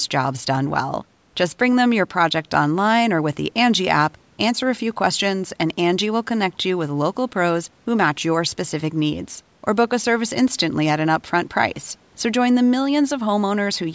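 No faults in this speech: the call microphone processing leaves nothing above 8 kHz and trims the lowest bass through its high-pass filter, both normal for that path.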